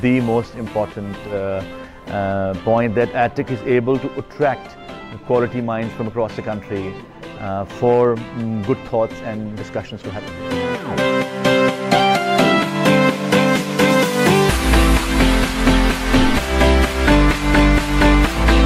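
No technical faults are audible.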